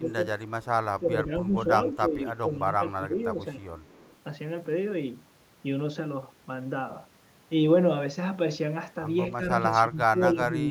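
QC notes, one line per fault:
0.00–0.18 s, 0.98–1.56 s, 1.87–3.62 s, 9.37–9.42 s, 9.81–10.7 s: speech suppressed in double talk. The echo canceller likely could not separate the talker from the loudspeaker echo while both sides spoke, so it turned everything down. The speech dips by about 10 dB, and by about 15 dB in the final stretch.
0.62–0.66 s, 1.97–2.02 s, 3.84–4.16 s: echo leak. The far-end echo canceller likely left some of the loudspeaker pickup in its microphone signal. This returns faint copies of the speech delayed by 248 ms and about 30 dB quieter.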